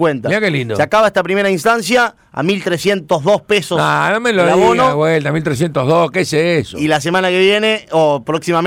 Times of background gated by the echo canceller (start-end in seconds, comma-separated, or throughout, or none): none